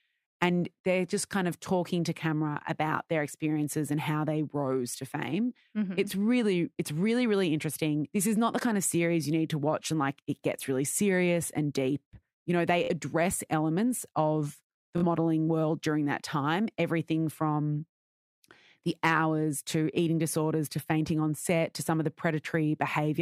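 Short machine-gun buzzes at 12.84–12.91 s, after "deep you know they", and 14.98–15.04 s are Bluetooth stutter: the receiver replayed its last buffer to cover 46.4 ms of lost packets each time.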